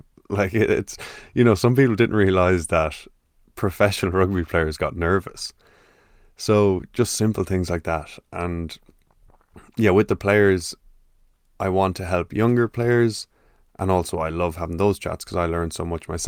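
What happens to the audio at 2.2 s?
Nothing goes wrong at 2.2 s; the speech carries on intact through that moment with no dropout, click, distortion or other fault to be heard.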